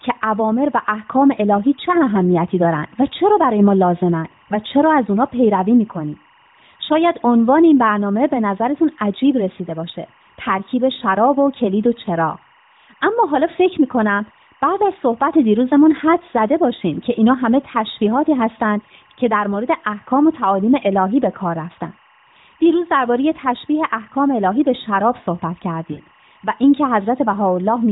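From start to finish there is timecode bleed: linear timecode leaking from a neighbouring track, heard as a thin chirping warble about 35 dB below the speech. A spectrogram shows steady bands near 1 and 2 kHz, alternating in a pattern that fits 23.976 fps code.

From 25.92 to 26.00 s come lost AMR speech frames. Corrupted frames forced the decoder to repeat its last good settings at falling gain for 60 ms, which fits three 20 ms frames. The speech smears and dips before recovering. The waveform shows a shrinking envelope, and the spectrogram shows smeared, stretched harmonics below the 4 kHz ceiling of the narrowband codec.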